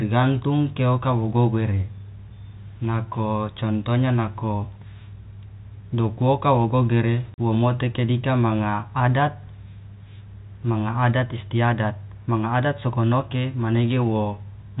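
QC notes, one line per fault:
7.34–7.38 s, packet loss filled with silence: a 40 ms hole drops out of the speech, consistent with two lost 20 ms packets replaced by silence. On the waveform it shows as a flat line with square shoulders. On the spectrogram it is a clean vertical gap across the whole band, which here tops out near 4 kHz from the G.711 telephone coding.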